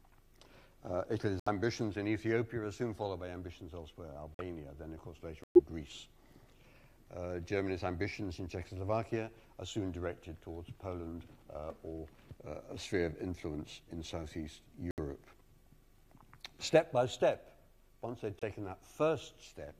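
Abrupt drops to silence break the audio five times: 1.40 to 1.48 s, 4.34 to 4.42 s, 5.44 to 5.60 s (the longest, about 160 ms), 14.91 to 15.00 s, and a brief 18.39 to 18.43 s gap. Each hole starts and ends sharply, and the timing stays intact. This is a corrupt frame muted fault: flipped bits made the decoder reject damaged compressed frames, and the player substituted silence. The hole lengths point to anywhere from a single frame to several consecutive ones.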